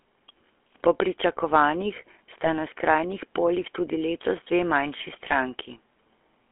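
The speech passes through the GSM full-rate codec for its whole length. The codec rebuilds the voice from a vocal-tract model driven by sparse, regularly spaced pulses, at a rate that fits a 13 kbps full-rate stream, with the line band held to roughly 300 Hz to 3.4 kHz. The coarse excitation gives the speech a plainly audible buzzy, gravelly roughness, and nothing above 3.4 kHz survives, so it sounds dull and boxed-in.

At 2.44 to 2.47 s, GSM bit errors corrupt the decoder's parameters, which points to a single damaged frame and an error rate near 2 percent. The bad filter, pitch or gain values distort the spectrum for that moment, producing a brief squawk. From 5.28 to 5.36 s a second burst hits what sounds like about three frames, so the voice breaks into a longer gargling, popping stretch before decoding recovers.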